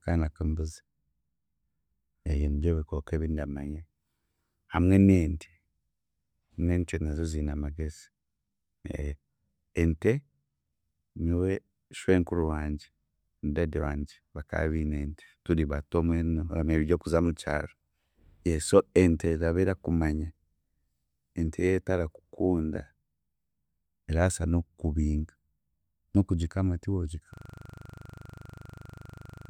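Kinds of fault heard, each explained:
System hang loop: the system froze while the hardware kept replaying one 40 ms buffer, turning the speech from 27.34 s to the end into a 25 Hz buzz.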